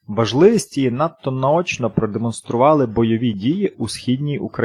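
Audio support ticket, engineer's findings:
No faults found in the speech clip during review.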